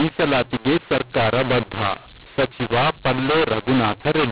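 The mu-law and A-law mix-up runs from the first moment to the last: the telephone speech was encoded with A-law and decoded as mu-law. Because the two companding curves map the 8-bit codes to different levels, loud parts come out at the wrong amplitudes, and the quietest samples are lifted well above silence. The voice sounds harsh and gritty, and pauses fill with hiss, all within the narrow telephone band that stops at 4 kHz.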